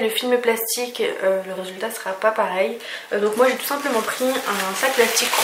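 Nothing stood out as a technical problem on listening to this audio.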